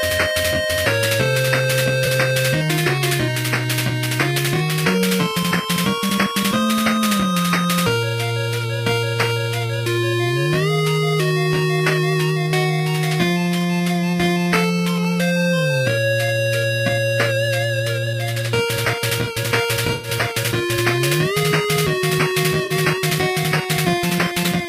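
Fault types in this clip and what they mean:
AAC frame loss with concealment: at 2.05, 19.87–20.09 and 22.64–22.72 s, the decoder patches missing frames from the last good spectrum, leaving brief smeared, noisy gaps.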